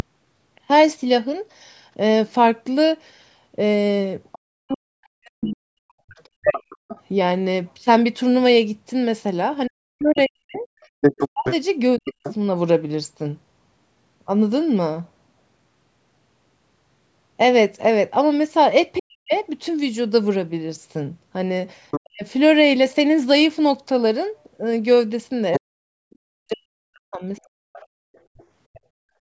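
Right from the start there's a DC offset: the whole waveform sits shifted off zero, which you won't hear but which eats headroom and parks steady energy at the very bottom of the spectrum. From 4.32 to 7.01 s the other side's voice leaking through shows up, well under the talker, likely echo the canceller didn't fully remove from the loudspeaker pickup. Overlapping that, from 4.48 to 12.13 s, comes speech suppressed in double talk: the talker dips or chops out for around three seconds in total, sometimes by roughly 40 dB, likely as the canceller clamps down while both sides talk. Between 10.54 and 12.34 s the leaking far-end voice comes through about as loud as the talker, and inside that stretch, at 10.95 to 10.99 s, the background is gated by the echo canceller, dropping about 40 dB for a split second. The pattern repeats from 18.99 to 22.24 s, with the talker squeezed for about half a second in total while the leak runs 19.33 to 22.0 s, a bit louder than the first one. 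Then from 25.53 to 28.8 s the leak returns, quieter again, with the talker ducking for around two seconds between 25.59 and 27.78 s. Finally, from 28.06 to 28.32 s the room sound gets gated, sinking about 32 dB. Nothing sits above 8 kHz, which is just the call's normal microphone processing.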